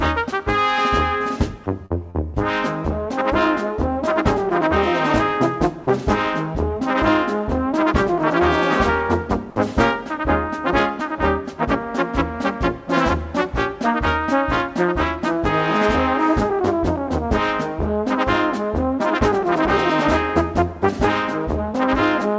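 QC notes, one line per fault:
1.86–1.92 s and 2.10–2.16 s, short concealed packet loss: In each case about 40 ms of the stream arrived too late for the decoder, and the receiver covered the gap by extending the preceding sound, about 44 ms at the first point and 37 ms at the second, before crossfading back into the real signal. Each gap is heard as a brief smear or wobble, because the substituted audio only approximates what was lost. Both fall within about 0.3 s.
5.84–5.86 s, sound dropped by the voice detector: For about 20 ms the audio gives way to steady, featureless noise, and roughly 10 ms of the actual sound is lost before it returns. The likely cause is a sending-side voice detector that mistook a quiet stretch for background and stopped transmitting, so the receiver generated comfort noise in its place. The substitute noise matches the band-limited G.722 path, with nothing above 8 kHz.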